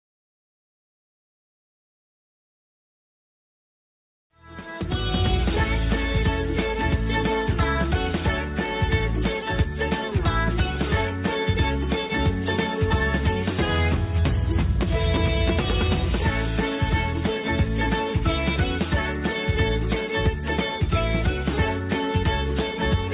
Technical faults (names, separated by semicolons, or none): none